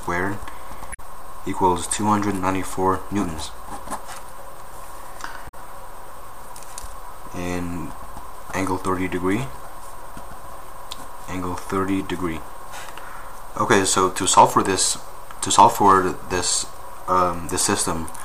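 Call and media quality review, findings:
Damaged data in the compressed stream: short glitches at 0.90–1.00 s and 5.45–5.54 s, roughly 0.1 s each. Probably the decoder hitting garbled bytes, misreading those frames and losing sync until it finds the next clean frame header.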